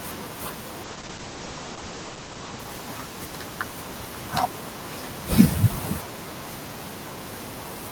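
From 0.84 s to 4.67 s a call bitrate drop starves the encoder, so speech turns rough and muffled, worst for 1.27 s, fitting a fall from 48 to 11 kbps. On a spectrogram the top edge sinks from 20 kHz to 8 kHz, then recovers.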